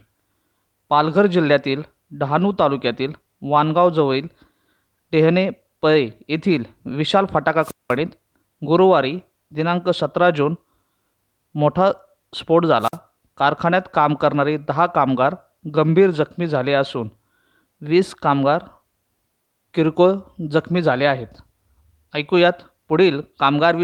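A speech recording with two wireless microphone squelch dropouts. At 7.61 to 7.95 s, hiss swells, then the receiver's squelch mutes the output for about 0.19 s. At 12.80 to 12.97 s it recurs, muting for about 51 ms. The FM radio signal faded each time.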